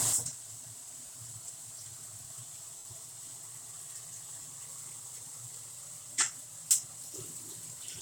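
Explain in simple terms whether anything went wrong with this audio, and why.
Three short dropouts come from lost LE Audio frames. Bits of the Bluetooth LE Audio stream never arrived. The receiver filled each gap by replaying the last moment of sound with its detail scrambled. That turns clean tones into a brief noisy smear. It happens at 1.06 s and 4.42 s, each lasting 30 ms. A longer one at 2.78 s lasts 70 ms. That one starts to fade before the real sound returns.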